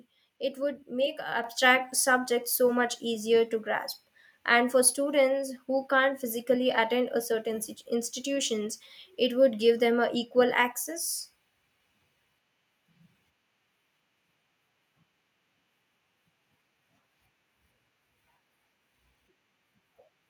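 At 1.44 s the microphone volume stepped up by about 6 dB in one jump, as the call software raised the input gain, lifting speech and background together.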